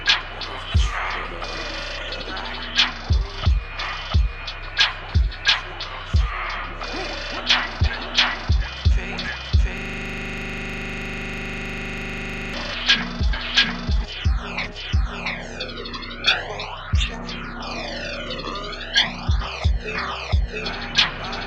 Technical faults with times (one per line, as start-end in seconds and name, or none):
9.78-12.54 system hang loop